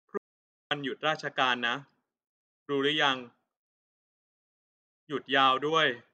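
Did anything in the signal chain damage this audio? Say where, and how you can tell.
Yes. An audio dropout to silence cuts the speech off mid-flow from 0.18 s to 0.71 s, losing about 0.53 s. No room tone survives. The waveform is flat-lined and the spectrogram shows a blank column. The likely cause is a lost input link while the recorder kept writing zeros.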